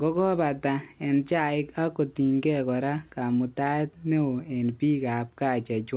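The signal shows no technical faults, and the speech carries the narrow telephone-band character of a call path, with nothing above about 4 kHz, which fits G.711 mu-law coding at 64 kbps.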